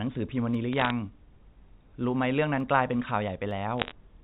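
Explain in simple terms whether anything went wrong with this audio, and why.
Three single sharp clicks interrupt the speech, at 0.55, 2.60 and 3.51 seconds. Each is most likely caused by dropped samples. A tiny sliver of the recording, a fraction of a millisecond, went missing. The sound jumps suddenly from one point to a later one, and that jump is the click.

Two short bursts of crackle also appear, from 0.73 to 0.91 seconds and from 3.78 to 3.92 seconds. These are bit errors on a digital phone line. The call travels as G.711 telephone coding, which has a narrow, phone-like sound. A small share of its digital bits got flipped. Each flipped bit spoils one tiny piece of sound, and many together make a rough ticking over the speech.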